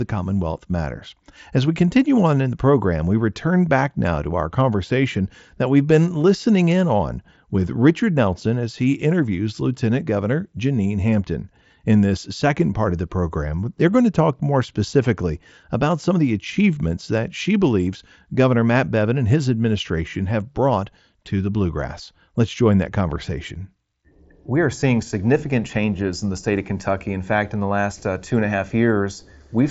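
At 15.05 s, 23.15 s and 24.81 s, concealed Bluetooth headset packet loss briefly patches gaps of 7.5, 7.5 and 15 ms with repeated waveform, leaving the two single losses nearly hidden and a brief buzzy tone with a small warble at the third in the mSBC-coded speech.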